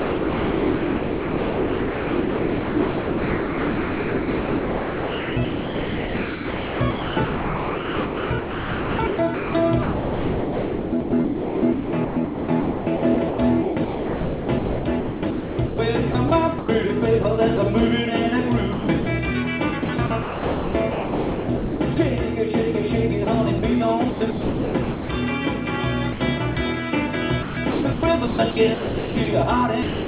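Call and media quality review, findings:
Sound chopped by the voice detector from 0 to 16.7 s (about 13.4 s of it swapped out), then at 17.23–17.59, 18.73–19.07, 19.83–21.97, 23.25–25.09, 26.13–26.57 and 27.43–29.27 s. Quieter bits vanish. Likely the sender's VAD gating repeatedly, with the receiver patching in comfort noise.

Sound dropped by the voice detector from 29.83 s to the end, with the last 0.26 s gone to comfort noise. Likely the sender's VAD took the tail for background and stopped sending, and it never retriggered. Top end is capped at 4 kHz throughout, which fits G.711 mu-law.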